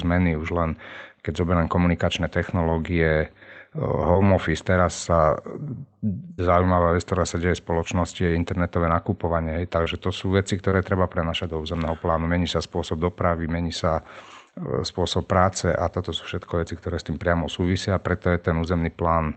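At 4.13 to 4.17 s, then 9.84 to 9.88 s and 10.70 to 10.74 s, there's short concealed packet loss. Each time about 20 ms of audio didn't arrive in time. The decoder papered over it by extending the previous sound and then blending back in, so you hear a quick smear or wobble.

The bigger one is a burst of packet loss at 6.33 to 6.40 s. Roughly 60 ms went missing. The concealment stretched the last sound out and faded it, giving a short held buzz or hiss before the audio picks up further along with that chunk gone.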